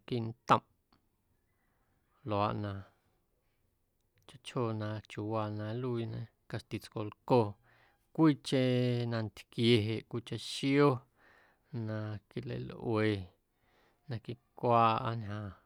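Nothing is technically wrong with this speech recording.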